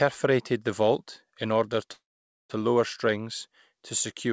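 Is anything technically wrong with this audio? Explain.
Yes. There is a call audio freeze from 1.92 to 2.52 s, right after "the vault in order". Packets were likely held up in transit and the jitter buffer ran dry. The receiver stretches the last sound into a short fading buzz or hiss, then about 0.47 s of silence. The speech picks up intact at "lower strings", with nothing lost, but now runs about 0.58 s late.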